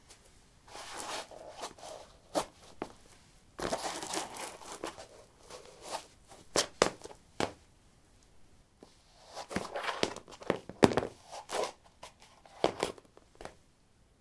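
Nothing here calls for comment, as the audio runs along without any technical fault turning up at any point.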